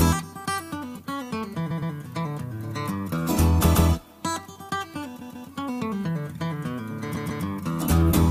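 Repeated frames: short runs of compressed frames were played again at 1.70, 3.74, 5.20 and 7.15 s. Blocks of 116 to 139 ms stutter once or twice.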